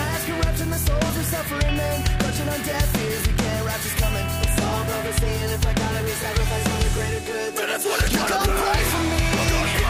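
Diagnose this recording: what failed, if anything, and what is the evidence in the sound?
Nothing in this recording points to a failure at any stage of the chain. The sound carries on without any audible break, distortion or other defect that would mark a fault in the wiring, conversion, processing, transmission, storage or playback.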